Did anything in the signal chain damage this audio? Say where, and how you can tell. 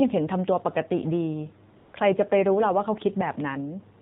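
Yes. The codec stage did: this speech runs through the AMR narrowband mobile codec throughout, and it's plainly audible. Nothing survives above 4 kHz, and the buzzy, synthetic edge fits a low rate around 7.4 kbps, where a few pulses per subframe have to carry the whole voice.

There's also AMR comfort noise from 1.78 to 1.94 s, a 160 ms gap where the phone stopped sending speech frames. The real background drops out and a smooth, steady synthetic hiss switches in, then back out again when the talker resumes.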